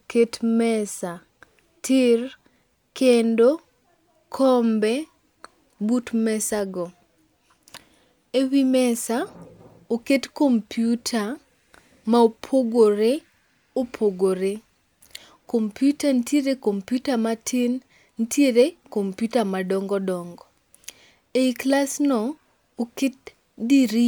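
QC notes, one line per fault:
No faults found.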